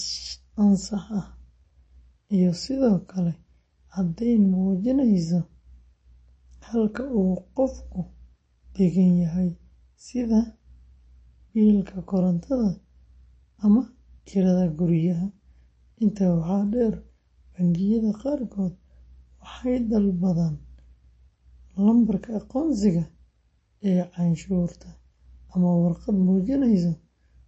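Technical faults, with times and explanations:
Throughout: MP3 compression. The audio has nothing above about 8.3 kHz and plainly audible watery, swirly artefacts, with sibilants chirping and consonant attacks smeared. This is likely a low-bitrate encode, around 32 kbps, where the encoder cuts the treble and drops weak frequency lines frame by frame.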